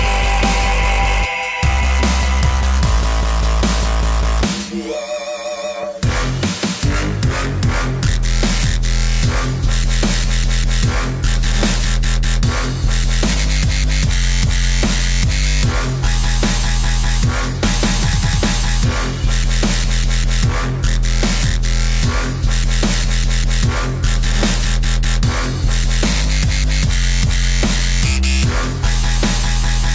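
Nothing technically wrong can be heard anywhere in this audio, so there are no times or causes to give.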